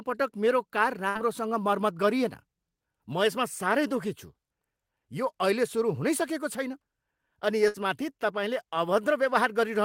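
Throughout the clip, a block size mismatch (truncated) discards the tail of each block, which fits 1024-sample blocks, leaving a steady 46.9 Hz buzz while the speech keeps essentially normal speed.

At 1.09 s, after "पटक मेरो कार", and again at 7.68 s, a burst of packet loss drops about 60 ms of audio. The receiver holds the last sound and fades it out for roughly 56 to 58 ms, and the speech resumes at "मर्मत गरिएन" after the first gap.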